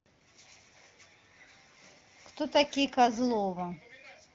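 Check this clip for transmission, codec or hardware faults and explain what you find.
No transmission, codec or hardware faults are audible.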